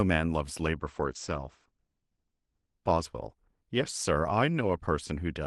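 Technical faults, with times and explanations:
0.81–4.03 s, call bitrate drop: speech turns rough and muffled, top end narrowing from 12 kHz to 8 kHz for up to 1.66 s, which fits Opus falling from 32 to 12 kbps.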